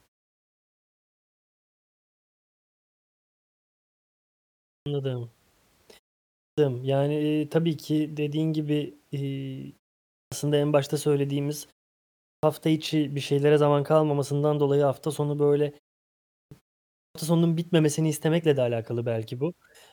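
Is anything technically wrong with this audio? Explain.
Yes, there's a clipped start after a pause, six times: at 4.56, 6.28, 10.03, 12.14, 16.23 and 16.85 s. Each time the output seems to doze off in the silence and needs about 0.3 s to wake, so speech pops in abruptly with its opening sounds missing.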